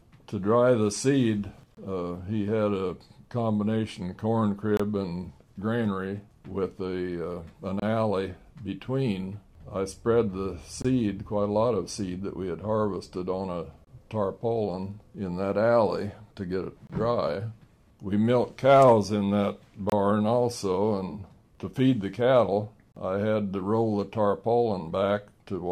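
The audio is broken by a gap between chunks: a hard-edged silence of about 25 ms at 1.75, 4.77, 7.80, 10.82, 13.85, 16.87, 19.90 and 22.92 s. These recur every 3 s of material, pointing to 3-second chunks joined with padding or delayed starts between them.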